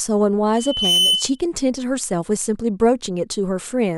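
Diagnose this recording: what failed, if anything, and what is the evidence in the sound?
Loudspeaker feedback squeal from 0.56 to 1.39 s: a pure tone at 3 kHz swells over roughly 0.4 s until it sits around 5 dB above the speech, then stops at 1.39 s. The failure is in the acoustic and analogue stage. The microphone is hearing the loudspeaker it feeds, and at 3 kHz the round-trip gain exceeded unity. That single frequency reinforced itself on every pass until the loop was broken.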